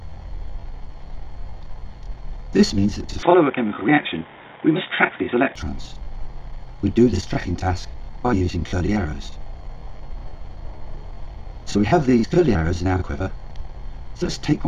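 From 3.23 s to 5.56 s the sound abruptly turns dull and boxy, with nothing above 3.8 kHz, then clears again with no gap at either change. That pattern points to the input likely having switched to a poorer device, one with a narrower band, its own faint noise floor roughly 40 dB down and a level shift of a few decibels. On a spectrogram the upper region goes empty in a sharp-edged block; the waveform shows a small step in height.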